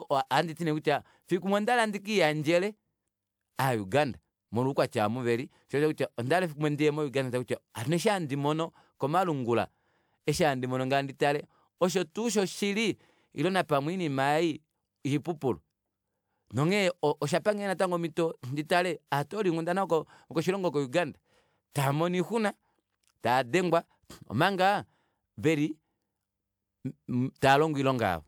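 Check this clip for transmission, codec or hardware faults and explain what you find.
Nothing here points to a transmission, codec or hardware problem, so there's nothing to flag in this speech recording.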